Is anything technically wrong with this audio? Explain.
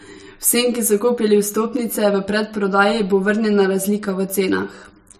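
Yes. Throughout the speech, the sound is hollow and phasey, with fixed notches through the spectrum. This is channel delay (comb filtering): one channel runs about 10 ms late, and summing to mono cancels shared content near 50 Hz and every 100 Hz above.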